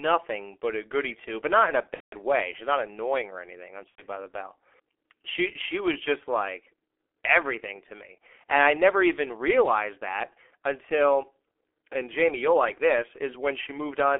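A low-rate G.723.1 codec, its sound pointing to roughly 6.3 kbit/s, carries this speech throughout and confines it to a telephone band of about 300 Hz to 3.4 kHz, with heavy coding damage. The result is muffled, hoarse audio with smeared consonants, because the coarse, slowly updated voice model cannot follow fast changes. VoIP packet loss concealed by the speech codec strikes at 1.94 to 2.14 s, about 180 ms, and at 3.89 to 4.02 s, about 90 ms. The decoder stretches the last pitch and filter into a fading buzzy tone or coloured noise, and the sound stays weak briefly after each gap.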